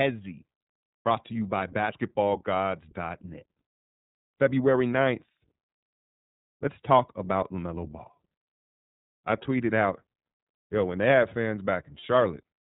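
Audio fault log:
throughout: iLBC codec. The speech passes through a narrowband codec that codes each block of excitation independently, which fits the 13.33 kbps mode with 30 ms frames. Nothing above 4 kHz survives, and the voice comes out plainly rough and slightly synthetic.
12.00–12.04 s: lost iLBC frames. A packet went missing, which fits a single lost 30 ms frame, and the decoder repeated the last pitch cycle blended with noise. The gap sounds like a brief held, faintly buzzy vowel, and the voice recovers almost immediately afterward.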